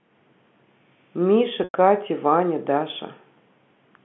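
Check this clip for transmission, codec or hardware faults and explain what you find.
There's one fault, a packet loss with pitch repetition, from about 1.64 to 1.73 s in this speech clip. Around 100 ms of audio went missing, which fits roughly five 20 ms packets. The receiver covered the hole by replaying the last pitch cycle and letting it fade. You hear the sound briefly stick on a buzzy, held tone that dies away before the speech picks up again. The narrow telephone band from the G.711 line comes through underneath as expected.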